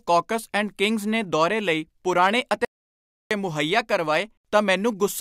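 From 2.22 to 2.52 s the speech peaks crackle: hard clipping, where the level ran about 2 dB past what the stage could pass, flattening the waveform tops. From 2.65 to 3.31 s the speech cuts to dead silence for 0.66 s, with no room tone. This is an audio dropout to silence, likely from the input being lost while zeros were written.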